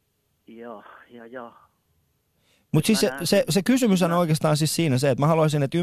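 No technical faults can be heard anywhere in the recording. Nothing in the speech points to a problem in how it was captured, processed or delivered.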